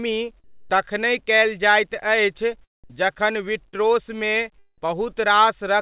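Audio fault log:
0.44–0.70 s, comfort noise in place of the background: for about 260 ms the room sound between phrases, already about 40 dB below the loudest speech, turns into a flat, textureless hiss about 3 dB quieter than the surrounding background. The likely cause is discontinuous transmission. The sender stopped sending audio when it detected no speech, and the receiver filled the gap with synthetic noise that only roughly matches the real background's spectrum, so the detail drops out until speech resumes.
3.69–3.75 s, short concealed packet loss: about 40 ms of audio failed to arrive in time, and the receiver patched roughly 38 ms of it by extending the preceding sound. It continued from the last pitch if the sound was voiced, or from shaped noise if not, then crossfaded back into the real signal. The result is a brief smeared or wobbly patch. Because the call path already cuts everything above 4 kHz, the patch has the same muffled top end as the rest of the clip.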